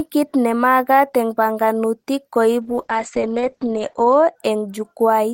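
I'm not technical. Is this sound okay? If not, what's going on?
No. From about 2.62 to 4.41 s the speech turns rough and muffled, losing its crisp top end. That's a call bitrate drop: the connection briefly got worse, so the call squeezed the sound into far less data until it recovered.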